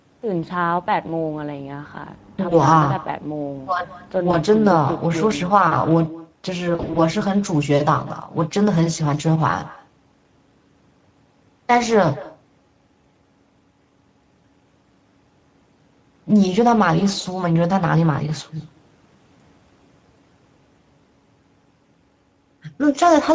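From start to finish the speech carries an echo with no canceller: each syllable is followed, roughly a fifth of a second later, by a fainter, thinner copy sitting about 21 dB below the direct sound. The far end's loudspeaker is feeding its microphone and nothing subtracts it. On a waveform every burst of speech has a low trailing shadow offset by that delay. On a spectrogram each harmonic stack is ghosted by a weaker, smeared duplicate just to its right.

Across the whole clip the Speex codec damage is plainly audible. The voice has a hoarse, grainy, slightly buzzy quality, which fits a middle setting around 16.8 kbps where the CELP excitation is coarsely coded. A spectrogram shows blurred, noisy harmonics instead of clean striations, and the upper band reads as a diffuse noise wash rather than structured detail. The call's microphone processing holds the spectrum below 8 kHz.

VoIP packet loss concealed by the speech codec first appears at 2.49–2.57 s and again at 4.31–4.36 s. 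Each fits a single lost 20 ms frame. In those gaps the decoder repeats its last pitch and filter, producing a brief buzzy smear that dips in level. The voice sounds weak for a moment before recovering. The worst stretch runs from 6.75 to 7.00 s, where about 120 ms is missing in scattered pieces across roughly 200 ms, the longest run being 40 ms. Here the sound breaks into a fading tonal buzz and coloured noise. On the spectrogram the harmonics flatten into unnaturally steady horizontal lines, and the waveform shows repeated periodic cycles that shrink in amplitude before normal speech returns.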